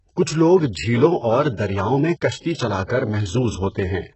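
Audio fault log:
Throughout, HE-AAC compression, likely: the speech sounds heavily coded, with treble rebuilt from lower bands, nothing above 8 kHz, and gritty, lispy s sounds, consistent with a very low bitrate around 8 kbps.
2.84 to 2.90 s, pre-echo: a short hiss creeps in about 59 ms ahead of an attack, since the codec spread its noise across the block and smeared the onset.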